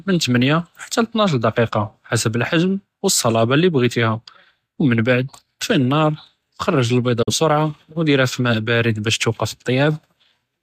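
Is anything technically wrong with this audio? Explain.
Yes. At 7.22 s the speech fades to silence over about 8 ms and stays muted until 7.33 s, leaving a brief hole before the sound resumes partway through the programme rather than where it left off. This is a digital broadcast dropout: the receiver lost the signal or got a frame that failed its checksum, so it muted until valid frames arrived. The roughly 43 ms of missing audio points to a single lost frame, and that material is gone.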